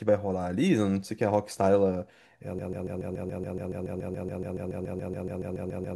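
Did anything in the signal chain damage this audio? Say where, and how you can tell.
Yes. From 2.59 s to the end, the speech turns into a broken-record loop. A 142 ms fragment repeats exactly, back to back, about 24 times. This is likely a playback buffer stall that kept replaying its last block. The speech from that point is lost.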